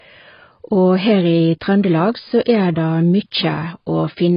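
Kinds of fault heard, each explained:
AAC compression: The speech sounds dull and warbly, with nothing above 5.1 kHz. A spectrogram shows a flat ceiling, likely from heavy AAC coding near 16 kbps.
Pre-echo: A hiss runs 45 ms into an attack at 2.42 to 2.46 s. Codec noise fills the quiet gap before the waveform's sharp rise.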